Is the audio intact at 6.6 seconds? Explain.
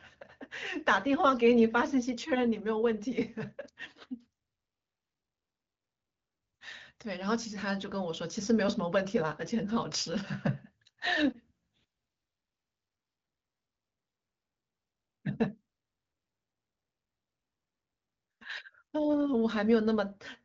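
Yes, at 6.6 seconds the speech is intact, with no dropout, glitch or other fault at that moment.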